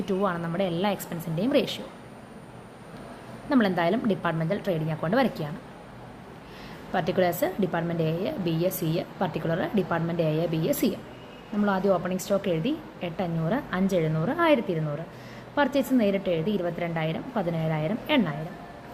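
Nothing stood out as a technical problem on listening to this clip.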